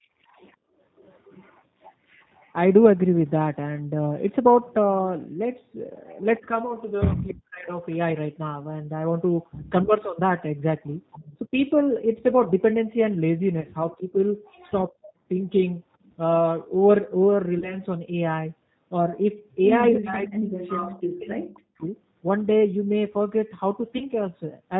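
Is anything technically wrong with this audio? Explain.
Yes. The speech has been through the G.729 codec for its whole length. It also has three short packet-loss dropouts that the speech codec concealed.

G.729 codec: Throughout, the audio carries plainly audible G.729 damage at 8 kbit/s. The decoder rebuilds the voice from a vocal-tract filter, pitch predictor and sparse pulses, so it sounds rough and slightly synthetic. On a spectrogram, energy stops sharply at 4 kHz.

VoIP packet loss concealed by the speech codec: This happens at 13.61 to 13.67 s, 17.59 to 17.76 s and 23.98 to 24.04 s. Each gap fits a single lost 30 ms packet. The decoder extrapolated from its last pitch and filter while lowering the gain, so each gap becomes a brief, fading smear. The longest effect is at 17.59 s, where recovery drags on. On the waveform, the envelope sags smoothly instead of dropping out. On the spectrogram, the harmonics stretch flat.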